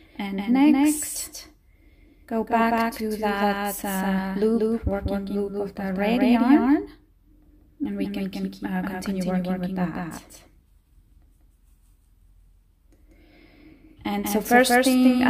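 A doubled audio track runs the whole way through: a second full-band copy trails the original by roughly a fifth of a second, at about the same level, with no decay or room colour on it. It's likely a second capture path or an out-of-step edit stacking two copies.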